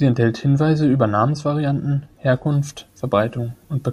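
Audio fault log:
2.46 to 3.92 s, pre-emphasis left on: from here to the end, the speech turns thin, bright and hissy, with the sibilants suddenly spitting. The treble boost applied for transmission never got its matching de-emphasis cut, so the top end stays lifted, about 11 dB higher at 10 kHz than at 1 kHz, a rising slope that fits the standard 50-microsecond FM curve. Body drops away and the high frequencies take over.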